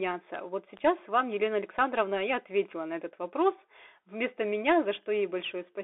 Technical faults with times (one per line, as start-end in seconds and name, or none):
0.00-5.83 Bluetooth CVSD headset codec